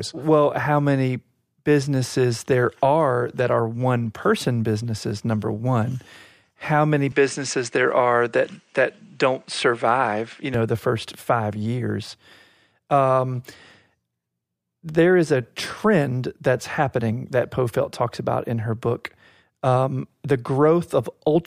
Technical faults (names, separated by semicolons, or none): input switched to a poorer device